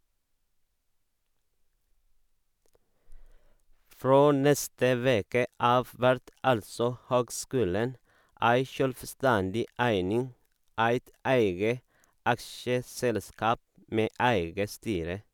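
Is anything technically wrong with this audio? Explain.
No, nothing technically wrong can be heard in this speech recording. There is no fault to point to at any moment in it.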